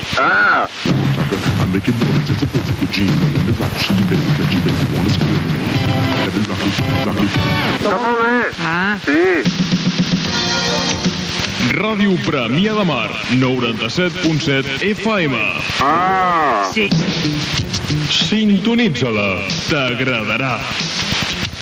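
Throughout, the level ducks by about 10 dB under each loud sound: gain pumping, likely from excessive input gain driving a fast limiter.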